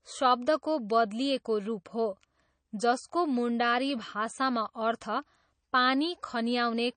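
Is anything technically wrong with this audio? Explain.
Yes. MP3 compression is likely behind the damage that runs through the whole speech clip. With too few bits the encoder zeroes weak frequency lines that flicker between frames, which fits a low bitrate around 32 kbps. The result is plainly audible as a watery, swirling texture, with chirpy s sounds and smeared attacks.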